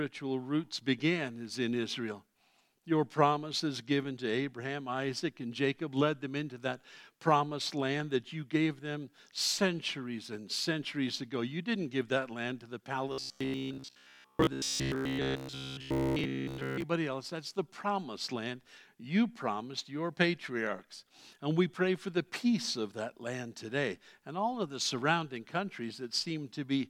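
From 13.12 to 16.84 s the audio turns into robotic sound from repeated short buffers. A rigid, metallic buzz sits at 66.8 Hz, a period of about 15 ms. The likely cause is late-arriving audio, with short buffers replayed through most of that stretch.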